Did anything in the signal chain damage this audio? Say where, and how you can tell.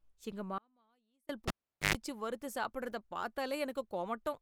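Yes. From 0.58 to 1.29 s there is an audio dropout to a faint residue: for about 0.71 s the speech cuts abruptly to a trace roughly 35 dB down, then returns mid-flow. The likely cause is a momentary loss of the feed upstream while the downstream path stayed live.

From 1.48 to 1.95 s, the analogue wiring shows a cable pulled and plugged in. A pop opens about 0.42 s of near silence, including roughly 0.1 s of 50 Hz mains buzz as the tip makes contact. A second pop comes just before "வறுத்து சாப்பிடறத".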